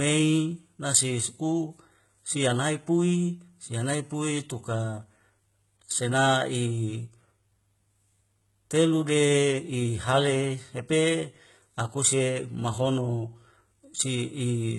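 HE-AAC compression, running for the whole clip, is the likely cause of the damage heard here. Only the lower band of this speech appears to be truly coded; the upper band is rebuilt by copying lower content upward under a coarse envelope, and nothing survives above about 11.8 kHz. The damage is heavy, which fits a very low bitrate around 16 kbps. Sibilants come out gritty and metallic, and the treble sounds detached from the harmonics beneath it.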